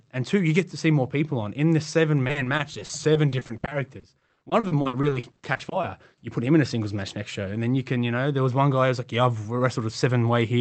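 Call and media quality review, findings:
Repeated packet loss (robotic sound), 2.23–5.85 s, after "the seven". Choppy speech. Many short gaps, longest 60 ms, filled by extending prior audio. Probable cause: network loss upstream of the jitter buffer.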